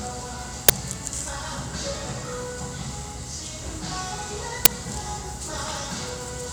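At 0.69 s there is a sudden, loud burst of digital noise. It lasts about 12 ms and then the sound carries on. This is an uninitialised buffer. A block of audio was sent to the output before anything had been written into it, so stale memory contents played as samples. The burst's length fits a 512-sample buffer. The same fault returns at 4.65 s, with a burst of the same length.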